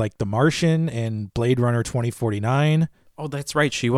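Nothing in the speech stood out as a technical fault on listening.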